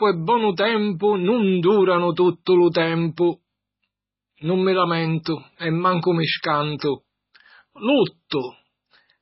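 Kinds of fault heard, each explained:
MP3 compression: Heavy, constant damage is most likely from low-bitrate MP3 encoding. With too few bits, the encoder has removed everything above about 5.6 kHz, so the speech sounds dull and the s sounds are blunted. Weak frequency components are dropped and restored from one frame to the next, which gives a watery, swirling texture across the whole clip. Consonant onsets are smeared. This depth of damage fits a bitrate around 16 kbps.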